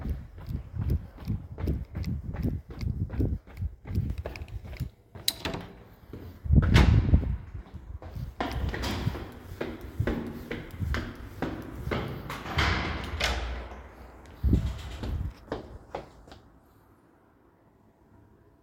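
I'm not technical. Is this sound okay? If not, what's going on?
No. At 4.1 s there is a sudden gain jump: everything, including the background noise, abruptly becomes noticeably louder and stays that way until the end. This is likely a volume setting changed instantly rather than being faded in smoothly.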